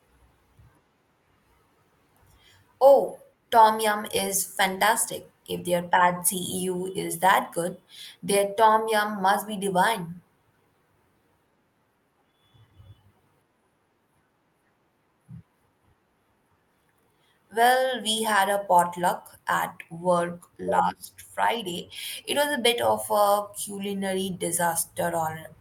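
Nothing in the recording stands out as a technical fault, so there's really nothing to flag here.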